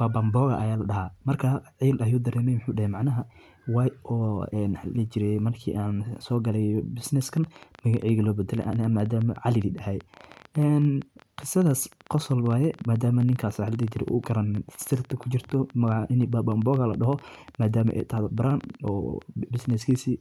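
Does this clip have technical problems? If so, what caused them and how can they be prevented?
Yes. From 7.37 s to 19.96 s a train of clicks ticks over the speech at about 10.4 per second, unevenly spaced, roughly 150 in all, peaking near the speech level. The likely cause is interference from nearby equipment or a faulty connection or power supply. Keep phones and power supplies away from cables and use a stable, properly powered interface.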